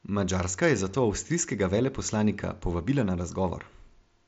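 The speech carries no audible technical fault, and its content stops near 7.7 kHz, which fits the upper limit of a Bluetooth mSBC headset link working normally.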